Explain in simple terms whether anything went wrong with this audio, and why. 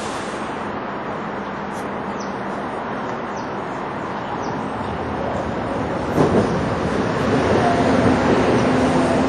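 Something did go wrong, and it lasts the whole clip. The sound has a smeared, washy quality, with a ringing hiss that swells and fades along with the sound itself, and the very top end is missing, with nothing above about 14.9 kHz. The likely cause is WMA compression squeezed too hard: the encoder works in long chunks of time, so its errors spread out and blur, and it discards the quietest and highest detail to save space.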